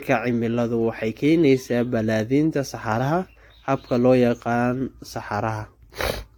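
Throughout the speech, the sound is swirly, smeared and hollow. Attacks are blurred, and nothing is heard above 18.9 kHz. The cause is likely generation loss. Repeated lossy encoding, about five passes, stacks up quantisation noise and spectral holes. This fits AAC-LC at 96 kbit/s.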